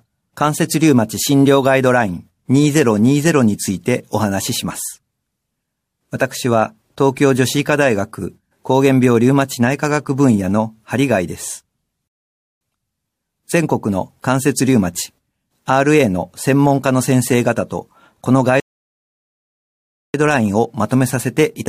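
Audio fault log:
12.08–12.61 s and 18.60–20.14 s, rebuffering stall: the speech abruptly drops into dead silence, first for about half a second (0.53 s), then for 1.54 s, and each time picks up exactly where it broke off, with nothing skipped or repeated. The player drained its downloaded audio and had to halt until more data arrived. Because playback simply paused rather than jumping ahead, no speech is lost, but the pauses add about 2.1 s in total.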